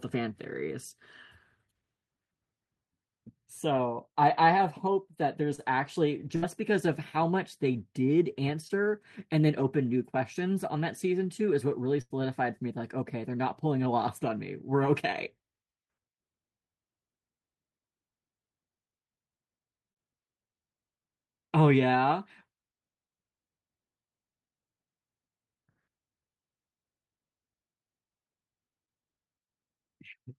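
Short concealed packet loss strikes at 5.55–5.60 s. About 20 ms never arrived, so the decoder stretched the previous sound into a brief smear. A burst of packet loss follows at 6.36–6.44 s. The receiver held the last sound and faded it, then the speech jumps ahead with 60 ms missing. Another short concealed loss at 8.68–8.71 s leaves a second quick smear. A longer burst at 12.01–12.12 s drops 80 ms. It is heard as a held, fading sound before the speech resumes further on.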